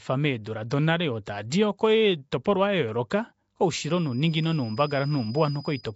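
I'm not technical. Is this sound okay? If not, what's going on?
No, not quite. The whole clip has a rough, hissy, underwater sound, with nothing above about 7.7 kHz, so the top end feels dull. That's likely Nellymoser compression, the old Flash microphone codec, which packs audio so tightly that weak frequency bands get swapped for noise.

From about 3.63 s to the end, there's also a thin, single-pitch whistle at around 5 kHz sitting quietly beneath the speech, slowly swelling and fading. That's a feedback whistle, likely from a speaker-to-microphone loop sitting just short of a full howl.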